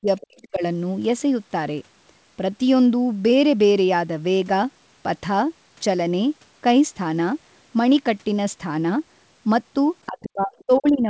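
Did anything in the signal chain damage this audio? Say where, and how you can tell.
Yes. Speech suppressed in double talk appears at 0.00–0.07 s, 0.25–0.63 s and from 10.07 s to the end, with drops of up to about 40 dB (about 35 dB at the end). The likely cause is the call's echo canceller, which ducked the talker while both sides overlapped.

Other side's voice leaking through is heard at 0.21–0.43 s and 10.24–10.28 s, about 25 dB below the speech, and at 10.58–10.64 s, about 35 dB below. These are faint scraps of the far-end voice, likely left in the microphone signal by incomplete echo cancellation.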